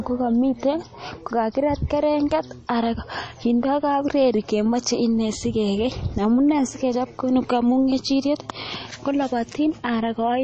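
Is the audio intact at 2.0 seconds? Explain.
No. At 2.0 s the speech is watery and swirly with chirpy sibilants, likely from MP3 compression at a rate near 32 kbps; the spectrogram shows a flat ceiling around 8.3 kHz.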